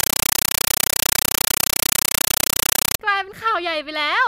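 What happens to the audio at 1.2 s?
At 1.2 s the speech is replaced by a compressed stream played as audio, which runs from 0.0 s to about 3.0 s. An AC-3 bitstream is being passed to the output as if it were ordinary PCM samples instead of being decoded. Each frame lands as an 8 ms burst of noise followed by silent padding, repeating 31.25 times a second, so the result is harsh, very loud, chattering static.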